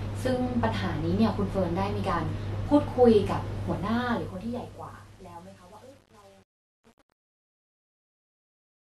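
Truncation distortion on a fade runs from 3.57 s to the end at 8.92 s, as the speech fades out over roughly the last five seconds. The gain stage behind the fade drops its low-order bits without dither, so quiet samples snap to a coarse staircase of levels, which fits an 8-bit path. From 3.88 s onward the fading voice turns gritty and grainy.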